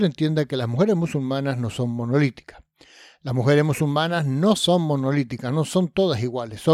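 No technical faults can be heard anywhere in this audio.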